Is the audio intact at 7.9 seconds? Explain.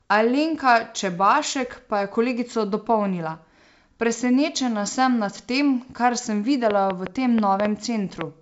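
No: a train of clicks runs from 6.71 to 8.22 s, roughly seven uneven pops about 15 dB above the speech, likely from electrical interference.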